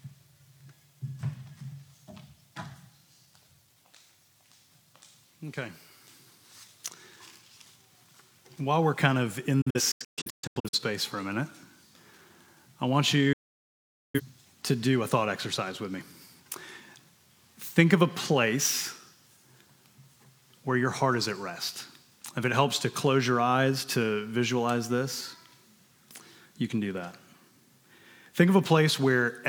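At 9.61 s a digital broadcast dropout begins. The receiver stops getting clean frames and mutes, with 8 ms fades. Until 10.79 s the sound breaks into several short holes, the longest 128 ms, totalling 640 ms. That fits around fifteen lost frames. A second dropout runs from 13.33 s to 14.21 s, with about 0.81 s muted. The audio sent during those gaps is gone.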